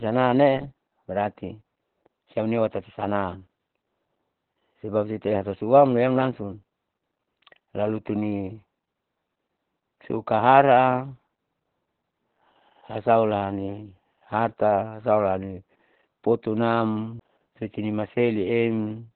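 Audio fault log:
throughout: Opus voice compression. The sound is muffled, hoarse and slightly robotic, with nothing above 4.2 kHz. The heavy damage fits an 8 kbps stream in SILK narrowband mode, where the linear-prediction coder narrows the band and codes the excitation coarsely in 20 ms frames.
17.19 s: CD skip. A very brief mute, roughly 15 ms, then playback resumes from a different point. The laser jumped to another turn of the disc's spiral, so the sound lurches forward or back by a whole number of disc turns.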